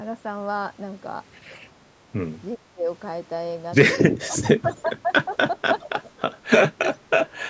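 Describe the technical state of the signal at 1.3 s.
At 1.3 s the speech is intact, with no fault present; it carries only the ordinary character of call microphone processing, with its bass trimmed and nothing above 8 kHz.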